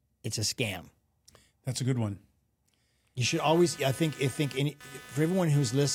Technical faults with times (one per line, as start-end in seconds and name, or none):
3.26-5.94 computer activity noise